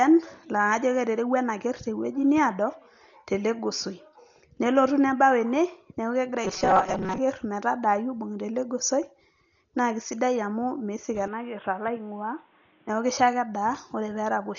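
A speech recording in which the whole track is dull, with nothing above 6.9 kHz and rough, fluttering noise around tones, likely from Dolby Digital compression at a low bitrate near 40 kbps, unlike plain low-pass filtering. From 6.45 to 7.18 s the speech becomes a rigid metallic buzz at 188 Hz, robotic sound from repeated short buffers, likely about 5 ms chunks with roughly half the audio skipped, a fixed pitch rather than codec roughness. From 11.28 to 12.89 s the input switched to a poorer device, likely: no gap, but the band suddenly narrows, the level drops about 5 dB and a new noise floor appears, unlike the constant codec dullness.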